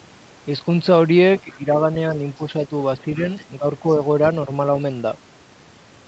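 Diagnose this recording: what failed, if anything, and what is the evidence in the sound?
Call processing failed, in the echo canceller stage. A faint second voice, the other side's voice leaking through, appears from 1.37 to 1.57 s and again from 3.37 to 3.44 s. It sits roughly 30 dB below the main talker and is brief. The likely cause is loudspeaker playback on the talker's device reaching the microphone. The canceller left a residue of that echo in the uplink.

The same stage also caused speech suppressed in double talk. The main voice dips from 1.44 to 1.79 s, by around 10 dB at worst. Shorter dips of similar depth fall at 2.37 to 2.41 s and 2.68 to 2.73 s. Milder dips of about 5 dB follow at 3.59 to 3.65 s and 3.82 to 4.0 s. The first dip overlaps the first leak. This likely means both sides were talking at once. The suppressor could not tell near speech from echo, so it turned everything down. 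The 8 kHz audio bandwidth, which fits Opus at about 32 kbps, is separate from these dips.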